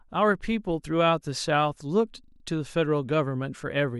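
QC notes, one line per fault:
2.24–2.44 s, system hang loop: one 40 ms slice of the speech repeats exactly, five times over. The machine or its audio driver briefly froze while the sound hardware kept replaying the same short ring buffer. Because each pass is identical, the repeats join into a rapid, rattling stutter at 25 times per second, which sits between a buzz and a machine-gun effect. Essentially no audio is lost, and normal playback resumes right after the loop.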